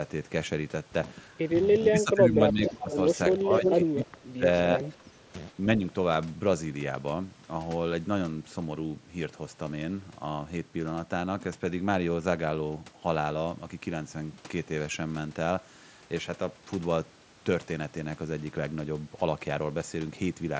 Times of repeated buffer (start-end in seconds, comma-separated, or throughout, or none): none